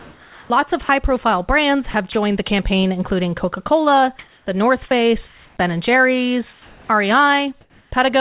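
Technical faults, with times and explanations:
0.0–0.5 s, 0.83–0.89 s, 4.88–4.91 s and 6.53–6.89 s, sound dropped by the voice detector: at each of these points the speech gives way to a steady, featureless hiss and returns once the detector triggers again. The opening 0.5 s fill swallows about 250 ms of sound, the short gap at 0.83 s loses all 60 ms, the 4.88 s gap loses about 20 ms, and the 6.53 s gap loses about 180 ms. The cause is likely a sender-side voice detector misjudging quiet speech or word edges as background and halting transmission, with the receiver generating comfort noise in the hole.
1.91–2.15 s, sound chopped by the voice detector: just before "the campaign including" the audio turns choppy. The detector toggles between sending and muting within this 0.24 s stretch, and about 60 ms of sound is replaced by synthetic fill. Likely cause: an unstable detector decision on low-level speech, so transmission cuts in and out more than once instead of holding open.
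4.19–4.46 s, 5.27–5.57 s and 7.61–7.91 s, comfort noise in place of the background: in these pauses, 270 ms, 300 ms and 300 ms long, the natural background, sitting about 36 to 40 dB below the loudest speech, is swapped for a flat, detail-free noise. Its level shifts against the real background by about +3 dB, about −4 dB and about −1 dB respectively, so each pause steps in level and texture. This is likely discontinuous transmission, with the receiver synthesising noise from a coarse spectral estimate. The whole clip is band-limited with nothing above 4 kHz, which fits a G.711 mu-law call path.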